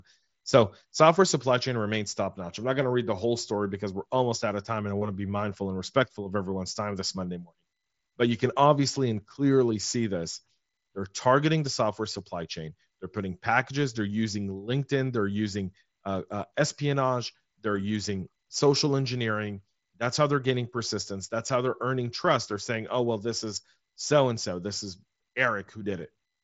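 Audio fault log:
No faults logged; the speech carries the band limit of a Bluetooth mSBC headset link, with nothing above about 7.7 kHz.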